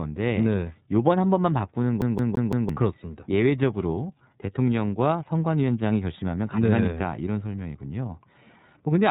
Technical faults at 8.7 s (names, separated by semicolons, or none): iLBC codec